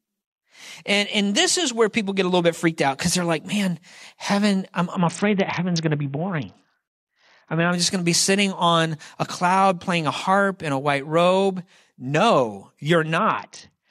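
From 4.96 to 7.72 s, and again from 13.18 s to the end, there's a Bluetooth SBC bit pool drop. The top bands starve, so the speech goes dull and gritty, which fits a pool falling from 28 to about 6, near 60 kbps.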